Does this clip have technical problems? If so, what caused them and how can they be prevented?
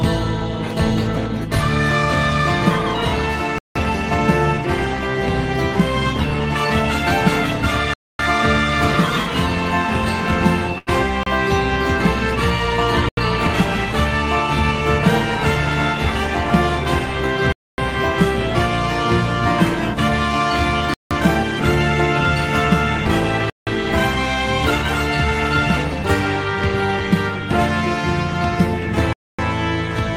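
Yes. There are eight blocks of digital silence, at 3.58, 7.94, 11.23, 13.09, 17.52, 20.94, 23.50 and 29.13 s. They last roughly 30 to 256 ms, and each cuts out and back in with no fade. The 85 and 171 ms gaps fit 4096- and 8192-sample buffers at 48 kHz going out unfilled. Giving the audio thread more headroom, with larger buffers and no blocking work in the callback, should stop them.

At 10.78 to 10.89 s there's a short stall from a late packet. The jitter buffer ran dry and the last sound was stretched for 88 ms, then playback picked up where it left off, so nothing's lost, just a held moment with a slight buzz or dip. A deeper or adaptive jitter buffer would absorb that delay.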